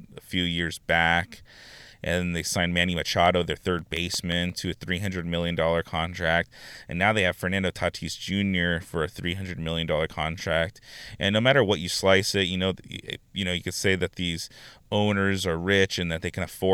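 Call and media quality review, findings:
CD scratch ticks, 3.26–4.67 s: nine brief ticks, roughly six per second, each a few ms at most, uneven in strength. Disc blemish exceeding error correction once per revolution; player interpolating or muting. Steady spacing distinguishes it from random buffer clicks.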